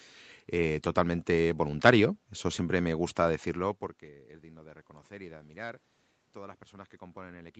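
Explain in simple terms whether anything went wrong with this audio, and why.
Nothing in this speech recording stood out as a problem on listening.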